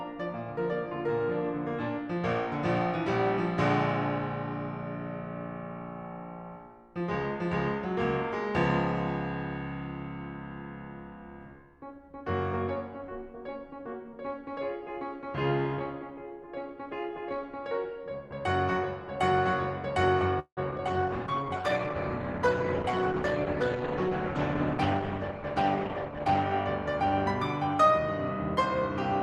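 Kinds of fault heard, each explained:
Call audio freeze: From 20.39 to 20.59 s the music stalls. The last sound is stretched into a fading buzz, with about 90 ms of near silence, and then it picks up where it left off. It's likely that packets got held up and the jitter buffer ran dry.
Short concealed packet loss: Two quick blips at 20.71 to 20.74 s and 20.78 to 20.80 s. Each is about 20 ms of audio that never reached the decoder, patched by continuing the previous sound and blending back, so you get a small smear or wobble.
Call bitrate drop: From 20.87 to 26.52 s the encoder drops from 64 to 14 kbps after the bandwidth estimate falls. The music turns coarse and watery and loses its top end for those five-plus seconds, then clears up when the rate recovers.
Jitter buffer speed-up: The receiver trims pitch-period chunks to cut a backlog. From 25.11 to 25.39 s it runs at 111% and drops about 40 ms, and from 25.89 to 26.20 s it runs at 114% and drops about 50 ms. 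Pitch stays put, but the tempo briefly rushes.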